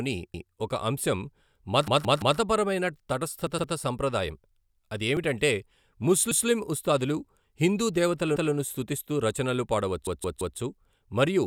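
Speech with repeated buffer faults. New audio arrived late, so the device replayed its last chunk of about 171 ms, which fits an 8192-sample buffer. The chunk sounds twice at 0.34, 3.58, 6.32 and 8.36 s. It sounds four times at 1.88 and 10.07 s. Each repeat has a hard join.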